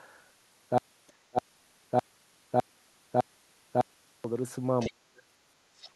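From 0.78 s to 4.24 s there's a stutter with silent gaps: a burst of about 197 ms replays five times, every 606 ms, with roughly 410 ms of dead digital silence after each. That's likely a stalled stream retrying and running dry, and the real audio in those gaps is gone.

At 1.07 to 1.12 s you can catch the other side's voice leaking through, faint at about 35 dB below the speech, likely residual loudspeaker echo the canceller missed. It returns at 4.79 to 4.93 s (about 20 dB down) and at 5.78 to 5.90 s (about 25 dB down).

Speech is suppressed in double talk at 1.31 to 1.38 s, and again for about 0.3 s from 4.86 to 5.24 s, where it overlaps that second leak. Both times the voice drops by roughly 30 dB, likely because the canceller couldn't separate the talker from the echo and ducked everything.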